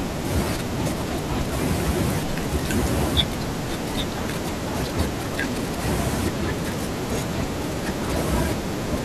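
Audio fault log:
No fault can be heard anywhere in this speech recording. There is nothing here to log.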